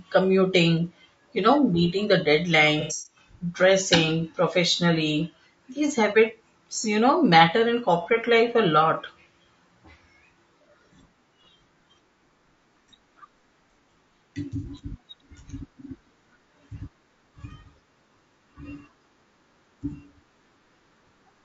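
Throughout, the speech sounds rough and grainy, with noise between harmonics and a thin top band. The likely cause is low-delay AAC compression (AAC-ELD) at a low rate, around 32 kbps. From 2.81 to 3.16 s, AAC frame loss with concealment fills about 210 ms of gaps, the longest around a tenth of a second, from the last good spectrum. This sounds smeared and phasey. Brief repeats of the same smearing occur at 8.03 to 8.08 s, 10.58 to 10.62 s and 14.57 to 14.65 s.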